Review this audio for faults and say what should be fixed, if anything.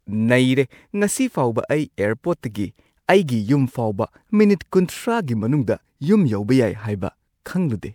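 Generation loss throughout the speech, likely from about four successive MP3 encodes at around 128 kbit/s, stacking noise and spectral holes into a swirly, hollow sound with blurred attacks. To prevent it, keep a lossless master for all editing and encode to MP3 only once, at the final export.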